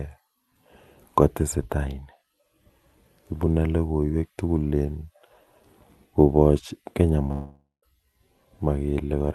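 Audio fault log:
7.31–7.85 s, long network dropout: the sound smears into a fading buzz for about half a second, falls silent for roughly 0.14 s, then resumes slightly further on with a sliver skipped. This is likely a network gap that the receiver papered over with concealment.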